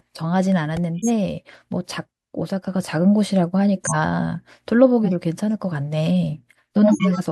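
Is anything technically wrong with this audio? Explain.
Yes. A repeated buffer and corrupt frames that were decoded anyway are both audible.

At 0.77 s a repeated buffer plays a 1.33 ms slice of the speech four extra times, which fits a 64-sample buffer. With so small a buffer the repeats are heard as a click or brief buzz. On a waveform the slice tiles identically with hard joins.

Corrupt frame decoded events occur at 0.98–1.10 s, 3.84–3.95 s, 5.04–5.12 s and 6.83–7.20 s. Damaged bits put energy at the wrong frequencies, which is heard as chirps or noise bursts. They peak at about −10 dBFS, about −5 dBFS, about −5 dBFS and near full scale. On a spectrogram they show as blocky patches that do not belong to the speech.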